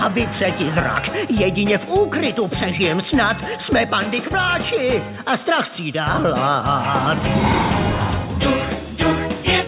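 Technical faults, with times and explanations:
Nothing technical stands out here; the audio runs without any dropouts, glitches or other problems worth flagging.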